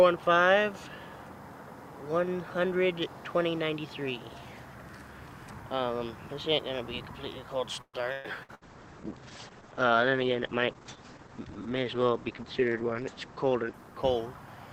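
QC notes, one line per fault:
7.81–8.64 s, repeated packet loss (robotic sound): packets went missing or arrived too late four times in quick succession, the longest hole lasting 122 ms. The receiver covered each hole by extending the last sound it had, for 361 ms of patched audio in total, and 240 ms of real content never arrived. With 44% of this stretch synthesized rather than received, the sound turns choppy and robotic, with pieces of the original absent.
8.48 s to end, call bitrate drop: the bandwidth estimate fell and the encoder was cut from 96 kbps to 10 kbps, staying at the lowest rate for about 4.8 s. With so few bits the codec quantizes much more coarsely and narrows the audio band from 20 kHz to 8 kHz. The top of the spectrum disappears, and the sound becomes muffled and rough. The bitrate never recovers before the clip ends.
12.30–12.62 s, jitter buffer speed-up: the jitter buffer had built up more audio than its target, so the receiver trimmed it by repeatedly cutting out short pitch-period-length pieces, removing about 40 ms overall. 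Playback over this stretch runs at 109% speed while the pitch stays the same, which makes the passage sound hurried.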